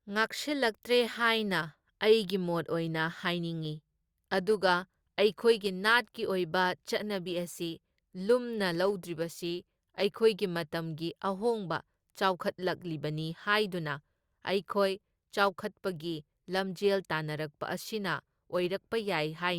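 Nothing in this speech recording stands out as a technical fault at any point, so there's nothing to flag here.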